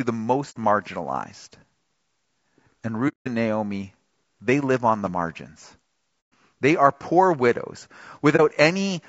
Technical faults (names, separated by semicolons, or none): low-delay AAC compression; AAC frame loss with muting